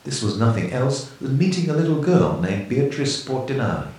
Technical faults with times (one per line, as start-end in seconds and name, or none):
none